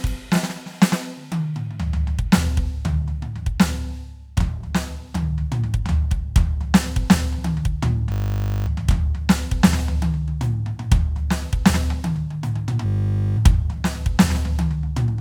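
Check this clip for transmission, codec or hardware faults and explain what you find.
The music has one fault, occurring twice: a system hang loop, from 8.12 to 8.68 s and from 12.86 to 13.38 s. The system stalled while the hardware replayed a 20 ms stretch of music, producing a steady 50 Hz buzz.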